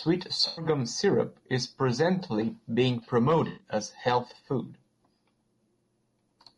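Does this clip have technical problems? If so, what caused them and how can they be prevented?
Yes. The whole clip sounds rough and grainy, with noise between the harmonics and a synthetic top band, likely from low-delay AAC compression (AAC-ELD) at a low bitrate, around 32 kbps. Sending at a higher bitrate would prevent this.

Two smeared, noisy patches are AAC frame loss with concealment. The decoder rebuilt about 100 ms at 0.47–0.65 s, just before "syrup is presently being", and about 120 ms at 3.47–3.67 s, between "syrup is presently being" and "as a health food". A more reliable network link with forward error correction would prevent it.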